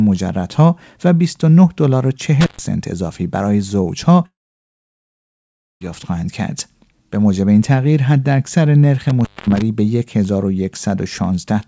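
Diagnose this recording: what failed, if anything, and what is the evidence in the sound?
Intermittent contact at 2.41 s and 9.10 s, in the analogue wiring: the speech cuts out with crackle for 0.13 s and 0.22 s, a loose connection briefly opening.

Long network dropout from 4.26 to 5.82 s: the last sound smears briefly, then about 1.5 s of silence, and speech resumes with that stretch missing, likely lost packets the receiver could only conceal.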